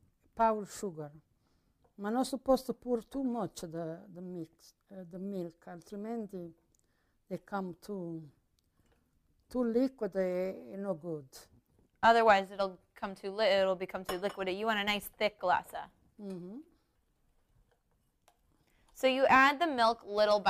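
No faults detected anywhere in the audio.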